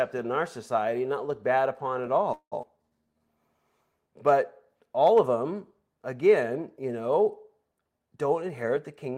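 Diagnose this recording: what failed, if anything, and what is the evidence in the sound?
Call audio freeze, network stage: after "looked bad upon at", 2.33–2.54 s holds a fading buzz then silence. This is likely delayed packets starving the jitter buffer. Nothing is lost, unlike a skip.

Skip ahead, network or jitter buffer: at 2.62–2.65 s, still just after "looked bad upon at", about a tenth of a second of speech vanishes. The two sides join almost directly, with only an 11 ms fill between them.

Jitter buffer slow-down, buffer stage: from 2.77 to 3.20 s speech runs at 82% speed with unchanged pitch. Repeated pitch periods add 85 ms, which stretches the sound rather than pausing it.

Jitter buffer speed-up, buffer stage: after "them again you know", 7.98–9.11 s runs at 109% speed with the same pitch. About a tenth of a second is trimmed in small pieces, not in one jump.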